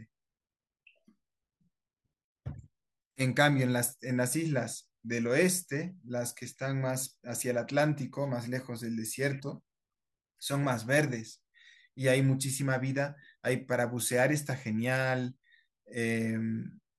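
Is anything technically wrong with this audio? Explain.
No, there's nothing technically wrong here; this speech recording comes through without any problem worth pointing out.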